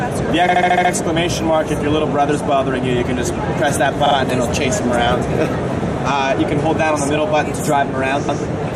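Audio with repeated frames at three points: a 72 ms block plays seven times from 0.48 to 0.91 s, a 48 ms block three times from 4.06 to 4.15 s, and a 144 ms block twice from 8.28 to 8.43 s. Each is a stutter from compressed frames being duplicated in the stream.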